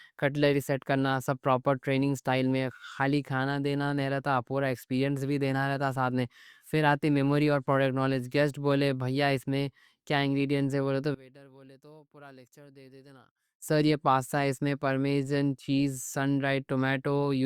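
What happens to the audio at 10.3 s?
Nothing goes wrong at 10.3 s: the speech carries on cleanly through that moment, with no dropout, glitch or other fault to be heard.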